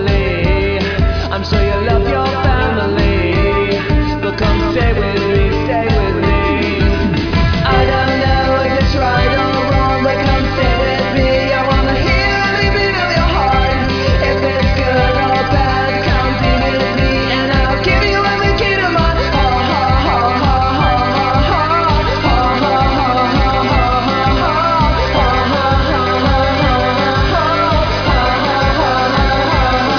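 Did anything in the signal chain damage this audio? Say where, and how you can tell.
No, nothing in the signal chain audibly damaged this audio; the signal stays continuous and intact throughout, with no stage leaving a mark that can be heard.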